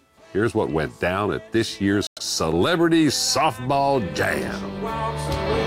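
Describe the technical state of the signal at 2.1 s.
At 2.1 s the signal is in a Bluetooth stall, running from 2.07 to 2.19 s. The likely cause is radio interference delaying packets on the wireless link, so the headphones' receive buffer emptied and playback halted until the retransmitted data arrived. What you hear is the audio cutting abruptly to about 100 ms of silence inside that window, then resuming where it stopped or slightly later.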